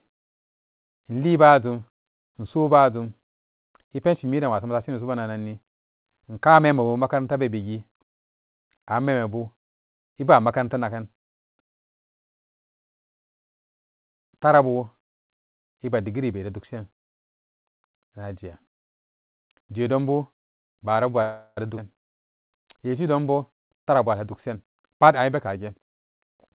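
Call audio freeze at 21.22 to 21.59 s interrupts this speech recording, heard through a phone-style path with nothing above 4 kHz. For about 0.35 s the last sound is stretched into a fading buzz that drops to silence for the final 30 ms before speech resumes with nothing lost. The likely cause is held-up packets draining the jitter buffer, which forces the receiver to improvise. A skip ahead follows at 21.77 to 21.80 s, where roughly a fifth of a second of speech is gone and the two sides are spliced with only a 7 ms join, as late audio was discarded to recover the added delay. Jitter buffer speed-up runs from 23.49 to 25.57 s. The speech plays at 108% of its normal rate without any pitch change, because many small pitch-period slices, around 150 ms in all, were trimmed to shrink an overfull buffer, which makes this passage sound hurried.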